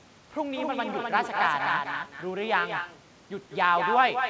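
From the first syllable to the end, the speech carries an echo with no canceller: the far end's loudspeaker fed back into its microphone, and nothing subtracted it, so every phrase returns about a fifth of a second later, only about 6 dB quieter and thinner. On a waveform each burst trails a smaller twin; on a spectrogram every syllable is doubled by a quieter offset copy, all of it confined below 8 kHz, which fits a wideband call codec.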